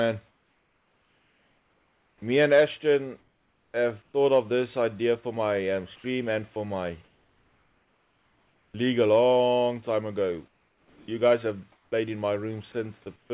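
From 0.28 to 2.22 s you get comfort noise in place of the background. The real room tone gives way to a smooth, featureless hiss about 6 dB quieter. The background already sits about 43 dB below the loud parts, and the texture goes flat. The likely cause is discontinuous transmission: the sender stopped sending during the pause and the receiver filled it with shaped synthetic noise. The same swap happens from 3.20 to 4.14 s, about 660 ms of it.

At 3.71 s, inside that stretch, there's an onset clipped by the voice detector. The sound jumps in hard with no soft start, because roughly 30 ms at its beginning went missing. The detector was likely a beat late noticing that sound had resumed, so that opening slice played out as comfort noise instead.

From 5.96 to 8.74 s the sound is chopped by the voice detector. Across that window about 1.8 s in total gets swapped for fill. Quiet edges drop out, so it sounds choppy. 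The detector is likely toggling between sending and muting several times. The same thing happens from 10.48 to 11.92 s, with about 800 ms replaced.

At the very end, 13.16 to 13.30 s, the background turns to comfort noise again, only about 1 dB down. The next onset, at 13.28 to 13.30 s, loses roughly 20 ms and starts abruptly, likely the detector catching it late once more.

Underneath all of this, nothing comes through above 4 kHz, which fits a narrowband call codec like 64 kbps G.711 A-law.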